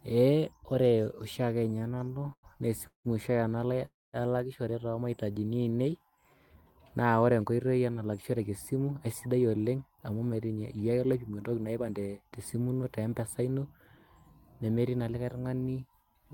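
A speech clip with four kinds of jitter-buffer fault. From 1.59 to 2.46 s there are repeated stalls (stutter): fifteen short gaps, the longest 98 ms, filled by stretching the last sound and making up about 27% of that span. Late packets kept draining the buffer, so the sound lurches in many small hitches rather than one long break. At 2.87 to 3.08 s and again at 3.85 to 4.16 s come call audio freezes of 175 ms and 279 ms, each a brief buzz or hiss that fades into roughly 110 ms and 200 ms of silence before the sound resumes where it stopped, likely from packets held up in transit emptying the buffer. Each is a single held pause, not a run of stutters. A jitter buffer slow-down from 5.31 to 6.36 s plays at about 86% speed, adding 159 ms by repeating pitch periods to rebuild the reserve. Sounds are drawn out while the pitch stays put, which separates it from a tape-style slowdown. From 8.06 to 11.92 s a jitter buffer speed-up runs at 110%, trimming around 0.4 s of pitch periods to shed excess delay. 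The speech sounds hurried at unchanged pitch.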